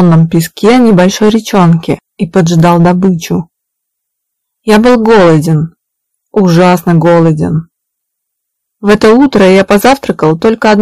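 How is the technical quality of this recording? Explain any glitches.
Quality's let down by hard clipping for the whole clip. The signal is pushed about 14 dB past what the chain can pass, so roughly a tenth of the samples get their peaks sheared flat. Those squared tops spray high harmonics, giving harsh fuzz on every loud moment.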